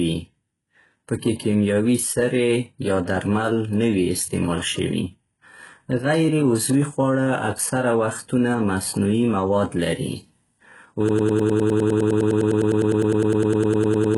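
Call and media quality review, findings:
Treble above 11.5 kHz is missing and the high band sounds synthetic, with heavy codec damage: gritty, metallic s sounds whose harmonics don't line up across the crossover. Likely HE-AAC compression, rebuilding treble by band replication at a very low bitrate, around 12 kbps. Unlike plain lowpass, the upper band is present but fake.

From 11.09 s to the end, a broken-record loop: one 102 ms fragment repeats exactly, back to back, 30 times, and the audio that should have played there is lost. Likely a stalled player, encoder or stream resending its last buffer. Unlike packet-loss concealment, the repeats are identical, not smoothed or fading.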